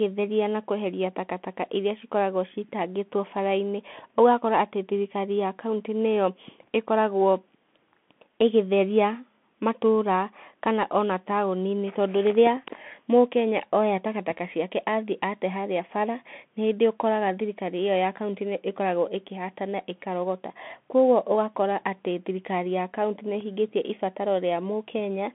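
The speech passed through a Bluetooth CVSD headset codec throughout. It is narrowband, cutting everything above 3.8 kHz, and its one-bit delta coding leaves scratchy s sounds and granular hiss underneath.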